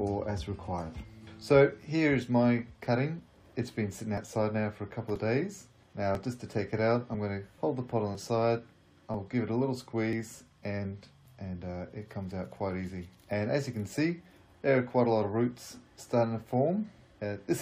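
Overlap between stream segments produces brief skips at 4.17, 5.16, 6.15, 8.15, 9.14 and 10.13 seconds, following the 1-second segment boundaries. Where adjacent segments claim the same stretch of time, the player trims the supposed duplicate, but that sound was never actually repeated, so between about 8 and 19 ms of real audio is lost at each join. The waveform jumps across the gap, heard as a tiny skip recurring roughly once per second.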